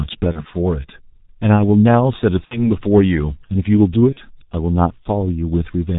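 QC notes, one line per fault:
Throughout: G.723.1 codec. The band stops at 4 kHz, so the speech is muffled and lacks sibilant brightness. The low rate, which fits a 6.3 kbit/s mode, leaves heavy damage: a hoarse, rough texture and smeared consonants. The voice model is refreshed only every 30 ms, so fast changes in the speech are averaged away and onsets blur into neighbouring sounds.
0.32–0.45 s, 2.45–2.67 s and 4.13–4.19 s: VoIP packet loss concealed by the speech codec. At each gap the decoder repeats its last pitch and filter with falling gain, stretching the sound into a buzzy tone or coloured noise that fades. The dropouts fit one 30 ms frame lost at the first and third points and two frames (60 ms) at the second. Because each frame is decoded from the previous one, the speech stays weak or distorted after the gap, which is why all three disturbances outlast the missing audio.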